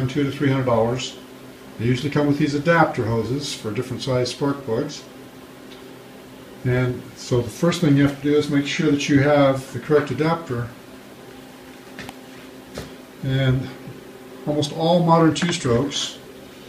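Nothing stood out as a technical fault on listening to the clip.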